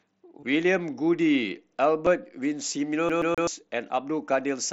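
At 0.40 to 0.43 s, concealed Bluetooth headset packet loss: about 22.5 ms of voice packets, which fits three lost frames, was replaced with a repeated waveform stretch, giving a brief buzzy tone and slight warble. A single 7.5 ms loss at 2.06 s is nearly hidden. From 3.09 to 3.47 s, a CD stuck on one turn keeps jumping back, so one 128 ms slice of speech plays three times with tiny mutes, an even stutter over the mSBC headset sound.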